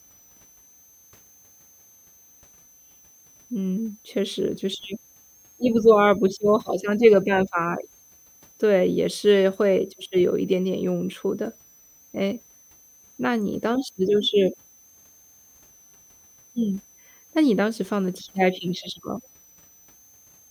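A switching power supply is running in an audible burst mode or beating with another one, and its whistle sits under the speech for the whole clip. The high, thin tone wanders between about 5.9 and 6.4 kHz, staying faint, roughly 35 dB below the speech.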